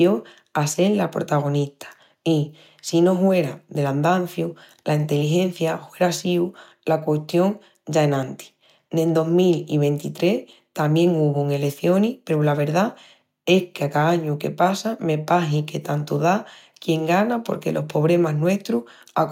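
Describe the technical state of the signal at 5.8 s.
At 5.8 s the speech signal is intact, with no audible fault at that point.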